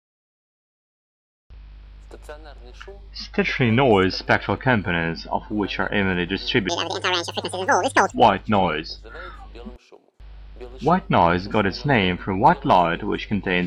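From 6.69 s to 8.12 s the audio was read two samples at a time (double speed): the reader treated each pair of consecutive samples as a single frame, as though the stream held two channels or samples twice as wide. Every second sample is effectively skipped, so that stretch plays at twice the speed and a full octave higher, 12 semitones up, giving a sudden hurried, chipmunk-like jump before normal playback returns.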